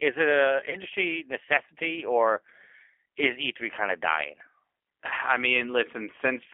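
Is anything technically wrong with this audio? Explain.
Yes, two things. The whole clip is speech squeezed through the G.729 codec: the band is held to roughly 300 Hz to 3.4 kHz, which fits an 8 kbit/s rate, and the rebuilt speech from a vocal tract filter plus a few pulses sounds plainly rough and a bit synthetic.

Then there's VoIP packet loss concealed by the speech codec at 0.70 to 0.76 s and 5.08 to 5.13 s. Each gap is about 30 ms, which fits three lost 10 ms frames. The decoder stretched its last pitch and filter with falling gain, so you hear a brief stretched buzzy tone or coloured noise that fades, and the voice stays weak or distorted for tens of milliseconds just after.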